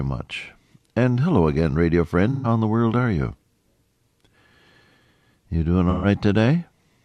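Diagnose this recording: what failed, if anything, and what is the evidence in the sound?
AAC frame loss with concealment at 2.31 to 2.47 s and again at 5.89 to 6.06 s, in the codec stage. Each gap of about 128 ms, which fits three lost frames, is filled from the last good spectrum, leaving a brief smeared, phasey patch in the speech.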